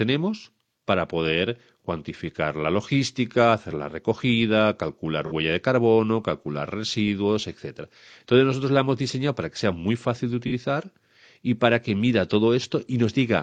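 At 5.26 s, between "hacer la recogida calcular" and "de carbono calcular residuos", and again at 10.47 s after "sea muy fácil de", AAC frame loss with concealment leaves a brief smeared, phasey patch of about 43 ms, which fits a single lost frame rebuilt from the preceding spectrum. Unlike a plain dropout, there is no silent gap or click.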